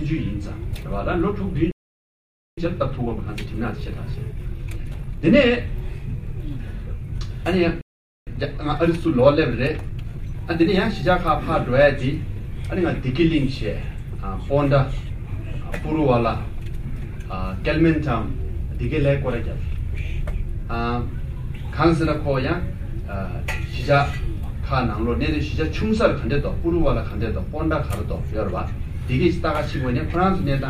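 At 1.71 s the audio cuts to silence for about 0.86 s, a playback stall. The likely cause is the player running out of buffered data or its output thread being blocked. Unlike a brief dropout or a click, the silence lasts long enough to feel like a hang. Sound returns at 2.58 s.

From 2.58 s to 5.58 s comes time-compressed catch-up, running at 1.1 times normal speed. The player recovers the lost time by trimming small slices and cross-fading the joins. The audio sounds hurried but keeps its pitch, which sets it apart from a plain speed-up that would also raise the pitch.

A second stall starts at 7.81 s and lasts about 0.45 s, again likely from a drained buffer or a blocked playback thread. It is shorter than the first. A second stretch of catch-up follows from 8.27 s to 11.27 s at the same 1.1 times rate, with the same rushed quality at unchanged pitch.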